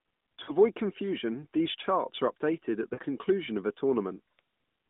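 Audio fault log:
0.44–0.56 s, lost AMR speech frames: a short drawn-out, fading smear just before "confusion these charts are". It fits two consecutive 20 ms frames failing, with the decoder repeating its last pitch and vocal-tract settings at falling gain.
2.94–3.00 s, lost AMR speech frames: between "are updated at the" and "of a", the sound briefly stretches and dips, again consistent with about 40 ms of concealment. It comes back weak over the narrowband 150 Hz–3.7 kHz line.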